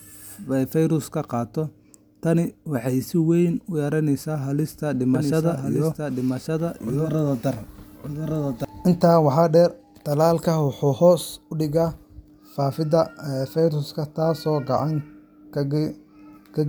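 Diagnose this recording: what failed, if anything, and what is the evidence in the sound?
A doubled audio track runs from 5.15 to 8.65 s: a full-band copy of the speech trails by about a second, roughly 5 dB quieter, with no decay or room colour, and it cuts in and out abruptly. The likely cause is a second, slower capture path.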